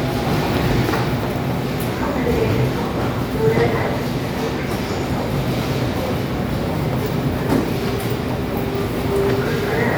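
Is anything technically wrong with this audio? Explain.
No, nothing here points to a technical fault.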